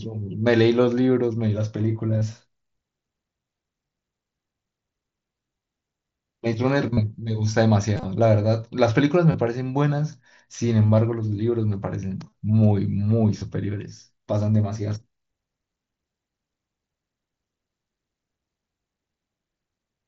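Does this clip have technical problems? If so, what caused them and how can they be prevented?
Yes. Concealed Bluetooth headset packet loss occurs at 2.19, 5.59, 6.93, 7.94 to 8.05, 9.32, 10.87, 12.29 and 13.39 s. Dropped radio packets were patched by repeating recent waveform, leaving short buzzy stretches of 15 to 38 ms. Keeping the phone near the headset and clear of Wi-Fi congestion prevents this.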